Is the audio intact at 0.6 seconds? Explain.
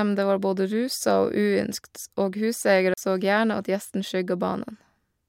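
Yes, the speech at 0.6 seconds is intact, with no dropout, click, distortion or other fault at that moment.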